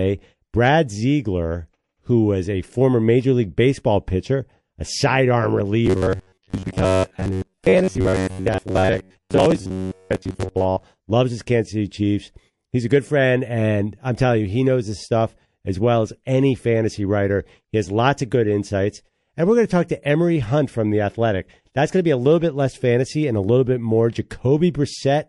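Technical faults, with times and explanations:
Throughout: MP3 compression, plainly audible. The speech sounds watery and swirly, with treble cut away and weak detail flickering in and out between frames. This likely comes from an encoder starved of bits, which fits a low rate near 48 kbps.
5.86 to 10.83 s: robotic sound from repeated short buffers. The speech turns into a rigid metallic buzz at 93.8 Hz. Short stretches of about 10.7 ms likely repeat while the real audio is skipped. Roughly 70% of this stretch is repeated material.
11.89 to 11.91 s: pre-echo. A short hiss about 10 dB above the quiet background arrives 20 ms before a sharp attack, softening it. The 48 ms transform block spreads noise back before the onset, and no short blocks limit it.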